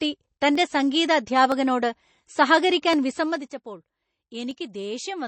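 Speech runs through with watery, swirly MP3 compression, likely from a low-bitrate encode around 32 kbps; a spectrogram shows flickering patches of missing detail. Single sharp clicks at 0.55, 1.52, 2.93 and 4.51 s are likely dropped samples, a fraction of a millisecond lost each time, visible as thin vertical lines and tiny waveform jumps. From 3.10 to 3.54 s, zipper noise ticks over the sound as the level falls by about 10 dB in roughly 200 steps per second, appearing as a staircase on the waveform envelope.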